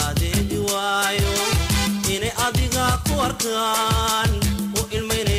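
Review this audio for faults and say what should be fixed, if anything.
No faults; nothing needs fixing.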